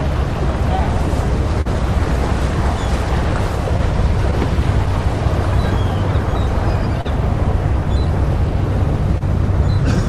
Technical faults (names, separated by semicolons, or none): clock drift between sender and receiver; short stall from a late packet; scattered short gaps